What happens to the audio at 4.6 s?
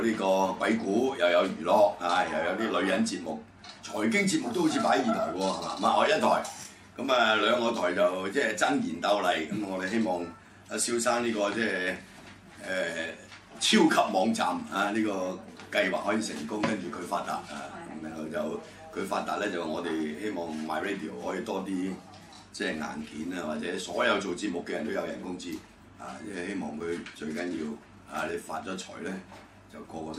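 Nothing goes wrong at 4.6 s; the audio plays through that moment intact, with no dropout, glitch or other fault.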